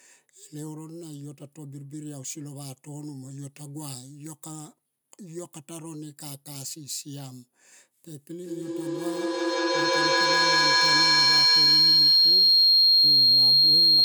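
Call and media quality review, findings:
Feedback howl, 8.41 s to end: tone around 4 kHz, loop repeating roughly every 150 ms, about 18 dB above speech. Co-located devices' acoustic loop gaining each pass.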